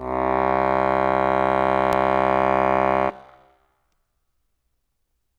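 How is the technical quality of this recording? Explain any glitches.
There is one glitch, a brief skip in the music at 1.93 s. This is audio missing between chunks, likely from a recorder working in 2-second blocks. A tiny slice is lost and the two sides butt together with no silence, which sets it apart from a dropout that leaves a gap.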